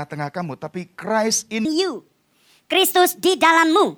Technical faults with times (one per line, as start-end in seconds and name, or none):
1.65-3.97 section at the wrong speed